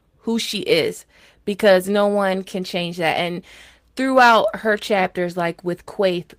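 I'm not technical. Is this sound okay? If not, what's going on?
Yes, no faults here.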